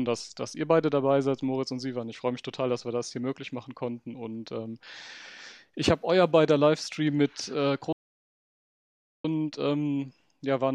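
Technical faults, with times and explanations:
7.93–9.24 s, audio dropout to silence: the sound cuts off abruptly to silence for about 1.32 s, with no room tone, unlike a natural pause, likely from a lost input.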